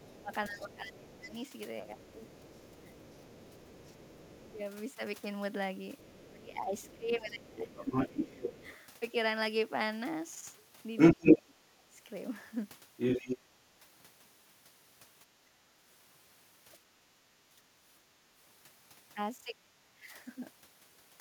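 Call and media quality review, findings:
Other side's voice leaking through, 0.0–8.76 s: far-end voice audible under the talker, roughly 10 dB down. Likely incomplete echo cancellation of loudspeaker pickup at the talker's device. Again 10.97–11.38 s and 12.97–13.37 s as short scraps, the first roughly 15 dB louder than the talker, the second a little louder. The canceller failed to subtract the loudspeaker path from the microphone signal, so the far end's own speech returns to them.

Speech suppressed in double talk, 0.09–4.6 s: talker dips up to about 15 dB, roughly 2 s in total across the span. Likely the echo canceller's suppressor clamping during overlap, unable to separate near talker from loudspeaker echo. 6.18–8.64 s: dips near 20 dB, about 1.5 s affected. 11.14–13.56 s: drops to about 25 dB, under a second in total. 15.71–17.66 s: shallow, about 10 dB, half a second. 19.44–20.14 s: deepest, about 35 dB, near-dropout lasting most of that span.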